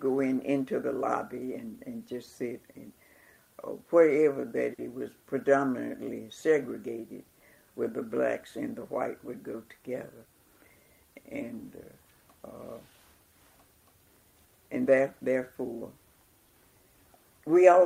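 At 4.73 s there is a short stall from a late packet, lasting to 4.80 s. The packet arrived late and the jitter buffer ran dry, so the receiver held the last sound for about 50 ms and then resumed exactly where it left off. Nothing is lost, which sets it apart from a dropout or concealed gap. It is heard as a brief sustain with a faint buzz or dip, and playback runs about 50 ms behind from that point until the buffer catches up.

From 10.18 s to 10.62 s comes a jitter buffer speed-up, as the buffer held more audio than it aims for. The receiver trimmed many short slices, each one or a few pitch periods long, removing about 50 ms in total, so the audio plays at roughly 110% speed for under half a second. The pitch stays the same, which distinguishes this from a clock or resampling error that would shift pitch. It sounds hurried rather than chopped.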